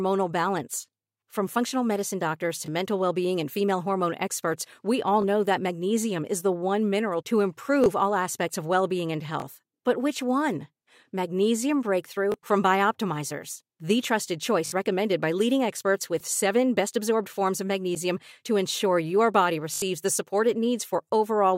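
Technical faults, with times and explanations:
2.66–2.68 s, 5.22–5.24 s, 7.84–7.86 s, 9.40–9.42 s and 12.32–12.34 s, repeated buffer: each time a tiny slice of speech plays twice, which fits a 20 ms buffer being replayed when the next one didn't arrive in time. The repeat is so short it comes across as a click rather than a stutter, for example between "functional medicine doctors" and "mental well being and", and again after "the one mineral to".
14.66–14.72 s and 19.74–19.82 s, repeated buffer: same fault but longer. The same 20 ms chunk loops three times at 14.66 s and four times at 19.74 s, with a hard join at each pass. That makes a short buzzy stutter, and roughly 70 ms of real speech is skipped at each spot.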